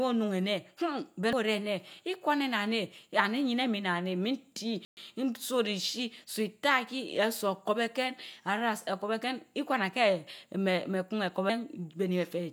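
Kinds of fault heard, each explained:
Damaged data in a compressed stream: part of the encoded speech was corrupted, so the decoder misread those frames and had to resynchronise on the next frame header. Each time this produces a very short blip, at 1.33 s and again at 11.50 s.
Playback stall: the player likely ran short of data or had its output thread blocked, so nothing reached the output until it recovered. The speech drops to silence for 120 ms, from 4.85 to 4.97 s, then carries on.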